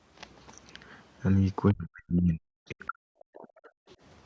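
From 1.72 s to 3.66 s the speech repeatedly sinks and drops out in pieces, at its deepest by roughly 40 dB, so that about a second and a half of this stretch is affected. This is speech suppressed in double talk. Both ends were likely talking at once, and the echo canceller, unable to tell the local talker from loudspeaker echo, pulled the whole microphone signal down instead of only the echo.

Two brief scraps of a second, faint voice surface at 2.81 to 2.87 s and again at 3.90 to 3.95 s. Each lasts only about 50 to 60 ms and sits far beneath the main talker, around 35 dB lower, so it is only a faint trace. This is the other side's voice leaking through. The far end's audio, played on the local loudspeaker, was likely picked up by the microphone, and the echo canceller did not strip it out completely. The second scrap arrives just after the suppressed stretch ends.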